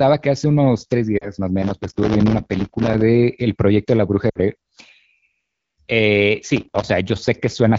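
A speech clip carried over AMR wideband (HD Voice), with the light, band-limited texture of that codec throughout. At 1.17 to 1.31 s and again at 4.29 to 4.39 s the speech briefly drops to near silence before the voice returns a little weak and rough. These are lost AMR speech frames. Radio errors made frames fail their checks, and the decoder stretched the last good pitch and vocal-tract settings with falling gain to cover the gap. The gaps are about 40 ms and 60 ms, which fits two and three 20 ms frames. From 1.63 to 3.02 s, and more briefly from 6.56 to 6.83 s, a gritty crackle and tearing rides on top of the speech. This is processor overload crackle. The processor repeatedly failed to deliver its tiny audio buffers in time, and each miss dropped in a sliver of silence with hard edges. The pattern points to buffers of a few milliseconds, with around a hundred missed in the longer burst and a few dozen in the shorter one.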